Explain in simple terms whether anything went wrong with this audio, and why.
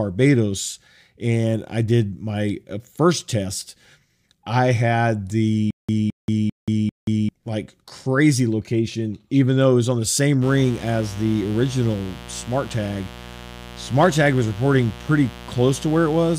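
Two things go wrong here. From 5.71 to 7.29 s there's a stutter with silent gaps: a 215 ms burst repeats four times, each followed by about 180 ms of dead silence. The player likely stalled, replaying the last bit while whatever should have come next was lost.

Then from 10.4 s to the end there's mains buzz, a steady, raspy hum sitting under the sound. It comes from electrical interference on a 60 Hz power supply, where sharp spikes twice per cycle spread into a gritty buzz.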